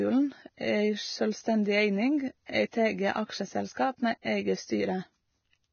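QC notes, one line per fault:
Throughout, Vorbis compression: the speech sounds hissy and grainy, its treble replaced by a rough, noisy wash, with smeared consonant onsets and a dull top where nothing survives above 6.6 kHz. This is likely heavy Vorbis coding at a very low rate, consistent with roughly 18 kbps. The encoder lowered its cut-off and quantised the remaining high band so coarsely that fine detail became noise of similar energy, roughening tones and blurring attacks.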